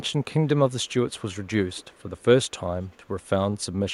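Through this speech clip there's a faint echo leak: a delayed copy of the voice trailing by about 0.39 s, turning up in scraps at 0.05–0.25, 0.68–0.94, 1.12–1.5, 1.72–2.24, 2.44–2.51 and 2.82–3.29 s. It sits well under the direct speech, a touch stronger in the 1.72 s stretch. The likely cause is a far-end loudspeaker whose echo canceller let some of its own playback slip back into the mic and down the line.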